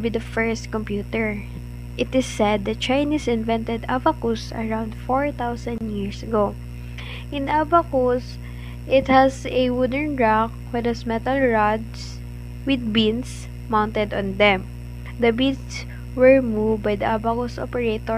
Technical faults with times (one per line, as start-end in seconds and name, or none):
5.78-5.81 gap at a join of encoded pieces